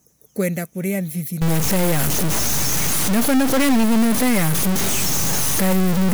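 From 1.42 s right through to the end, the speech turns distorted, and the gaps between phrases fill with steady noise. That points to a stuck bit, likely one converter line frozen at a fixed value, offsetting about half the samples in a waveform-driven pattern.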